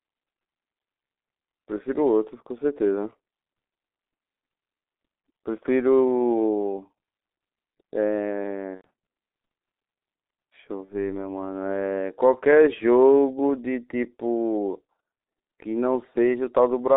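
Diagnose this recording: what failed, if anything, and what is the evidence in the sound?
At the codec stage, the speech went through G.723.1, a low-rate telephony coder whose output fits a bitrate of about 6.3 kbit/s. Heavy codec damage runs through the whole clip. The line band is limited to 250 Hz to 3.7 kHz, so the voice sounds muffled and hoarse. Because the coder rebuilds the voice from a slowly updated model in 30 ms blocks, consonants come out smeared.

At the network stage, the evidence is two gaps where VoIP packet loss was concealed by the speech codec. The first runs from about 8.75 to 8.86 s and covers roughly 90 ms of missing audio. The second, from 10.85 to 10.91 s, covers about 30 ms. In each gap the decoder stretched its last pitch and filter state into a sound that fades. The voice stays weak or distorted briefly after real packets resume, because each frame builds on the last.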